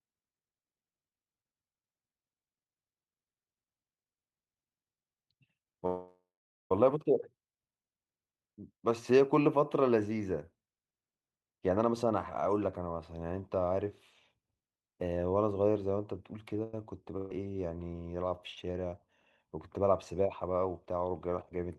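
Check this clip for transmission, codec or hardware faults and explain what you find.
Four network-delivery problems turn up in this speech clip, all clustered in its second half except the first.

Call audio freeze, 5.86 to 6.72 s. The last sound gets carried on and fades out, then there's about 470 ms of dead silence before the speech picks up exactly where it stopped. That's likely packets stuck in transit draining the jitter buffer, with the receiver padding 841 ms in total. Nothing is lost, but everything after this point arrives 841 ms later than it should.

Jitter buffer speed-up, 11.32 to 12.86 s. Here the speech runs at about 121% of normal speed while the pitch stays put, so it comes across as rushed rather than chipmunky. The buffer was holding more audio than it wanted, so the receiver clipped out tiny pitch-period-sized slices over and over, trimming roughly a third of a second to bring the delay back down.

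Short stall from a late packet, 16.63 to 16.74 s. One packet missed its slot, the buffer ran dry, and the receiver stretched the current sound for 98 ms until it showed up, then carried on from the same spot. You hear a sound held a touch too long with a faint buzzy quality. Nothing is missing, just 98 ms of added delay.

Burst of packet loss, 17.17 to 17.31 s. This one actually drops audio. About 130 ms worth of packets never made it in time, so the receiver extended the last sound for 132 ms, turning it down as it went, which gives a brief fading buzz or hiss with no true silence. Then speech jumps ahead, and the stretch in between is simply gone.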